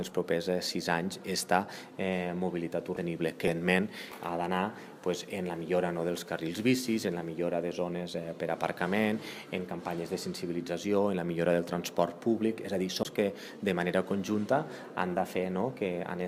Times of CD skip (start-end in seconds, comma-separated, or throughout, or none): 2.96, 13.03-13.05